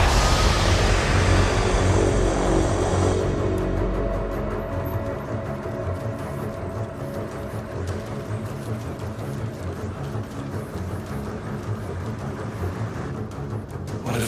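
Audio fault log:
No fault found in the audio.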